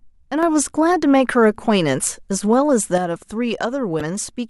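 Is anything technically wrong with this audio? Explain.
Yes, two faults. From 0.43 to 2.98 s the speech and background noise jump up together by about 6 dB, then drop back, a sudden gain jump, likely from a gain change applied without a ramp. From 3.97 to 4.01 s a brief disturbance cuts in. This is damaged data in the compressed stream: corrupted bytes make the decoder misread frames and lose sync.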